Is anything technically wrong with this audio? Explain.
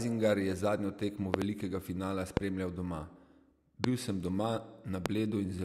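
Yes. Loud pops strike the speech four times: a double pop at 1.34 to 1.44 s, then single pops at 2.37 to 2.39 s, 3.84 to 3.86 s and 5.06 to 5.08 s. Each peaks roughly 20 to 25 dB above the speech, which continues underneath. The likely cause is a brief voltage spike, such as static, a connector or switch disturbance, or a driver glitch, entering the signal chain. The downstream circuitry shapes each spike into a sharp, thumping click.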